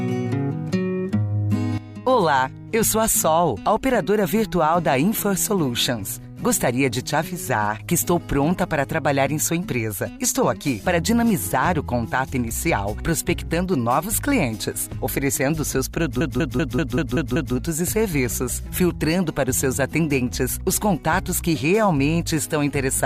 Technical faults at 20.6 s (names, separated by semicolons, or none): none